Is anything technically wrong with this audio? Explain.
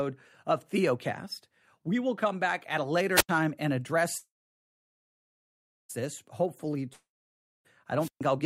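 Yes, there are four faults in this speech.

Wireless microphone squelch dropout at 3.15–3.29 s, after "come back at a", and 7.99–8.21 s, before "I'll get to it": the radio link fades, hiss rises, and the receiver mutes for about 85 ms and then 130 ms.

Call audio freeze at 4.17–5.91 s: the last sound smears into a fading buzz, then about 1.59 s of silence, likely from delayed packets draining the jitter buffer. Speech resumes 1.72 s late with nothing missing.

Long network dropout at 6.93–7.67 s: a fading buzz gives way to 0.58 s of silence, and about 0.72 s of speech never returns, likely because packets were lost outright.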